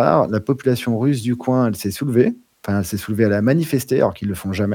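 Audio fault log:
No faults heard anywhere in this speech recording.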